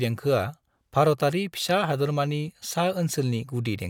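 Speech recording, no technical faults audible at any point.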